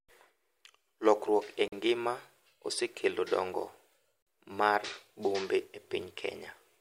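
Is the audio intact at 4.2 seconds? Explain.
No. From 4.22 to 4.27 s, right after "e ngima osekelo dongo" and before "mar bombe e", there is a gap between chunks: a 44 ms hard-edged silence at a join between 2.5 s chunks. Unlike a dropout, nothing is missing; the speech simply resumes where it stopped.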